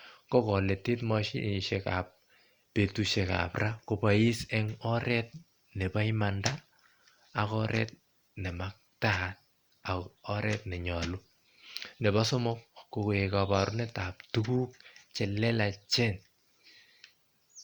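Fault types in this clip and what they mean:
No fault types are present in this clip.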